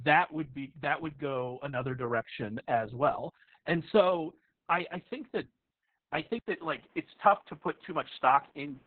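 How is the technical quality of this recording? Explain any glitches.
The technical quality is poor. Two faults can be heard.

Opus voice compression affects the whole clip. Nothing is left above 4.4 kHz. The codec's linear-prediction SILK mode has narrowed the band and coded the excitation very coarsely. That points to a bitrate of around 6 kbps. The speech sounds muffled, hoarse and somewhat robotic.

At 6.39 s there is a gap of 80 ms. From there to the end, the band shrinks further and nothing remains above 3.8 kHz. The likely cause is an input switched to a poorer device. The level stays about the same. The new device brings a faint noise floor, well below the speech, and a duller tone.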